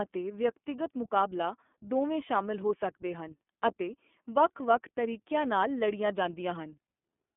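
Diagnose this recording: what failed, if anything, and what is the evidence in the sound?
The failure is at the codec stage: the whole recording has passed through the iLBC codec, a narrowband VoIP coder. It codes each frame's excitation without relying on the previous frame, so the speech stays clear but is plainly rough and synthetic throughout, with a grainy texture that fits 30 ms frames at the 13.33 kbps mode. The band runs only from 200 Hz to 3.4 kHz, giving a thin, boxed telephone sound.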